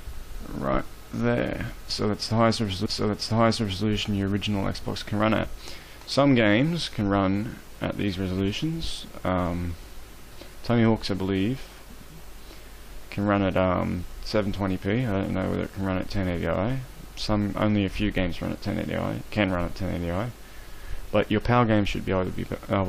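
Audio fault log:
2.85 to 3.84 s, stream segment repeated: the player queued the same stretch of the stream twice, inserting about 1.0 s of duplicated material. The audio jumps back with a small blip at the seam and replays that second before carrying on.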